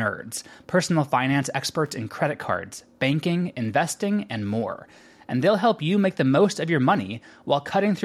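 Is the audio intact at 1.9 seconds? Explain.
No. A brief irregular burst of crackle and scratching cuts through the speech from 1.86 to 1.90 s: loose connector crackle, where a worn contact rapidly breaks and remakes the signal path.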